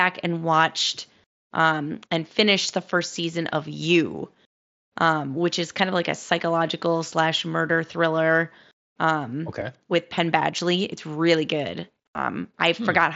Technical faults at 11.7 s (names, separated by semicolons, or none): none